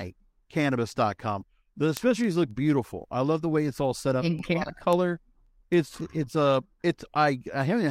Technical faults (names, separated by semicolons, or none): word clock ticks